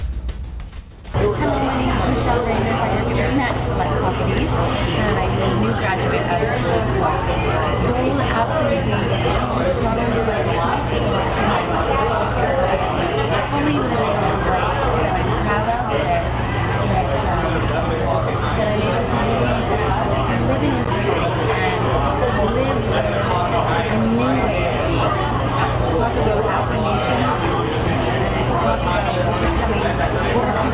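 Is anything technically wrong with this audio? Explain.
No, nothing technical stands out here; it all sounds just as it should, with nothing to flag.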